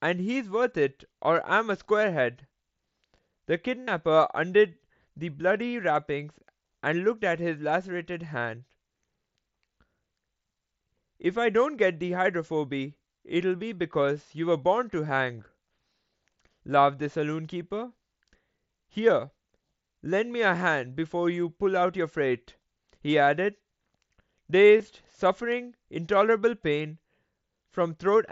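A brief buzzy, held tone at 3.83 to 3.88 s, an almost hidden blip at 15.39 s, and a scattered flutter at 24.78 to 24.85 s are concealed Bluetooth headset packet loss. Missing headset packets were patched by repeating recent waveform, through the mSBC wideband link.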